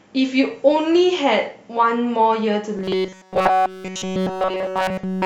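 From 2.77 s to the end the speech turns into robotic sound from repeated short buffers, a rigid 188 Hz metallic buzz, likely from a roughly 5 ms buffer looping nonstop.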